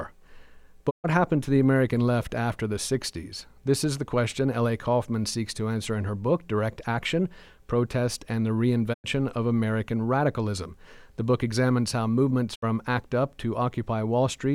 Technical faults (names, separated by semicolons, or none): digital broadcast dropout